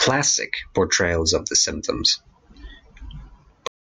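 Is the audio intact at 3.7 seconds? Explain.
No. A cut-off end begins at 3.67 s: the speech stops mid-sound and falls straight to digital silence through 3.94 s, with no natural decay. The final buffers of audio were never written or played out, so the recording simply ends early.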